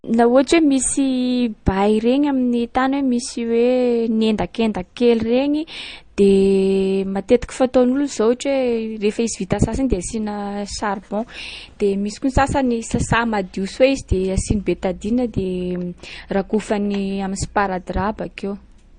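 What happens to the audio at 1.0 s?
At 1.0 s the speech carries the layered coloration of transcoding between lossy codecs, present from start to finish, not just at this moment. The smeared, swirly artefacts of a low-rate MP3 sit under a second coder's own grain, which points to an MP3 encode near 40 kbit/s that was likely re-encoded to Opus near 48 kbit/s. A spectrogram shows a hard ceiling at 9.6 kHz across the whole clip, with blotchy, quantised patches below it.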